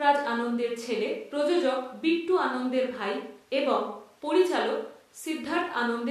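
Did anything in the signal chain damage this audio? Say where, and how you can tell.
No, nothing in the signal chain audibly damaged this speech recording. None of the stages, from wiring and conversion through processing, transmission and playback, leaves any trace of harm that can be heard.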